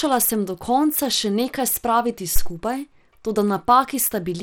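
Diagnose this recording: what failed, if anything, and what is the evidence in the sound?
The codec stage is at fault for the whole clip. Throughout the speech the top of the spectrum is thin and unsteady, with a gritty, coarse texture on the sound. The likely cause is Bluetooth SBC compression at a starved bitrate, with damage consistent with roughly 96 kbps. SBC splits the signal into a few wide sub-bands and hands out bits without a hearing model, so the weak upper bands get too few bits and flicker. On a spectrogram, nothing appears above 19.6 kHz, and the upper bands look blotchy and patchy over time.

At 2.36 to 2.51 s a phantom power thump comes in through the analogue input stage. It is a deep, dull knock that dies away in about 35 ms. Switching the supply on a live input puts a voltage step through the coupling capacitors, and the preamp passes that step on as a low-frequency transient. 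On the waveform it shows as a lopsided excursion that settles quickly. On a spectrogram it is a brief burst of energy concentrated in the lowest frequencies.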